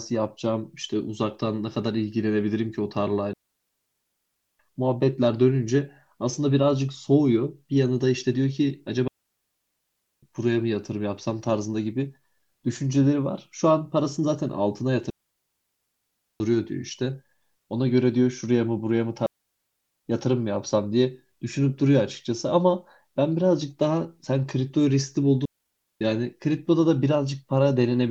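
Five clean holes of near silence cut through the speech: 3.33 to 4.59 s (about 1.26 s), 9.08 to 10.23 s (1.15 s), 15.10 to 16.40 s (1.3 s), 19.26 to 20.06 s (0.8 s), and 25.45 to 26.01 s (0.56 s). Each one drops away and returns with no noise burst at either edge. This is digital wireless dropout: the radio link lost too much data, so the receiver muted with a very short fade.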